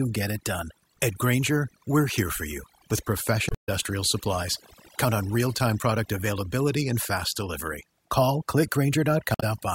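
A speech recording with two faults. Overdone noise removal runs through the whole clip. The background drops and breaks up into twinkling specks. The reducer is set too hard, so it cuts any frequency band close to its noise estimate, and quiet parts of the speech go too. Damaged data in a compressed stream breaks in twice, from 3.46 to 3.69 s and from 9.32 to 9.43 s. Each is a short squawk or blip. Corrupted bytes made the decoder misread frames and hunt for the next valid header.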